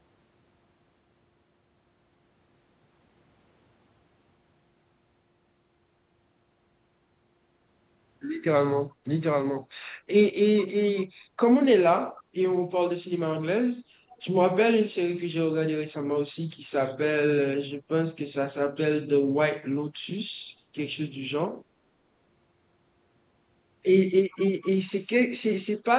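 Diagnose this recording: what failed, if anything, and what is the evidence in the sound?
Background gated by the echo canceller, at the call-processing stage: between 8.93 and 9.04 s the room sound dips by about 8 dB for roughly a tenth of a second, then recovers. A waveform shows a brief notch in the noise floor, and a spectrogram shows a short, full-band darkening.

Echo leak, also at call processing: faint delayed copies of the speech, trailing it by 432 ms, appear at 9.63–9.67, 12.16–12.23, 14.09–14.22 and 24.31–24.67 s, sitting roughly 25 to 35 dB down. The likely cause is the far-end loudspeaker's canceller passing residual echo back. A spectrogram shows weak ghost harmonics shifted 432 ms, confined below the 4 kHz ceiling of the G.711 call path.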